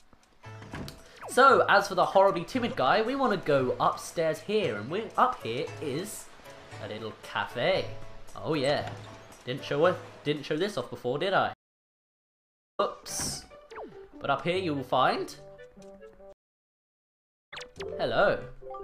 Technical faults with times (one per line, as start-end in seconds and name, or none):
11.53-12.80 stream reconnect
16.33-17.53 stream reconnect